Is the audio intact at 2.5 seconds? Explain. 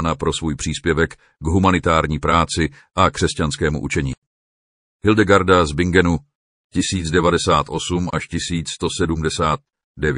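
No. Around 2.5 seconds, as throughout the clip, the speech sounds watery and dull with chirpy s sounds, likely from MP3 compression that is starved of bits.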